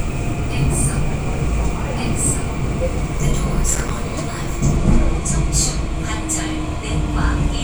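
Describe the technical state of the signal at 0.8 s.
At 0.8 s the audio is intact, with no technical fault present at that moment.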